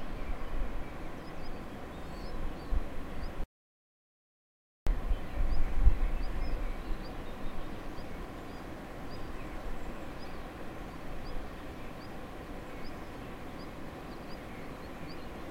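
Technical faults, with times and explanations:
3.44 to 4.87 s, audio dropout to silence: the sound cuts off abruptly and returns just as suddenly, leaving a gap of about 1.43 s that is completely dead, with no room tone or background hiss. That silence, rather than a quieter stretch, likely means the input signal was lost, through a disconnection, a failed link or an accidental mute, while recording carried on writing silence. Whatever occurred during that stretch is not recoverable.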